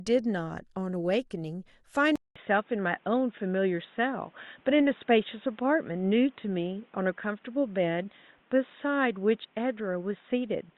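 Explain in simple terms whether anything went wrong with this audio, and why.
At 2.16 s the sound goes quiet for about 0.2 s. After that, it turns dull and boxy until the end. Nothing above about 3.8 kHz remains, and a faint new background noise appears, while the overall loudness stays the same. This is likely an input switched to a poorer device.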